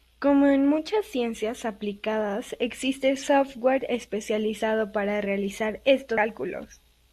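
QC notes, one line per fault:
6.17 s, compressed frames skipped: just after "software especializado para realizar" the audio lurches forward by roughly a fifth of a second, which fits about seven lost 24 ms frames. Adjacent frames overlap, so the seam is a short smeared blip rather than a click.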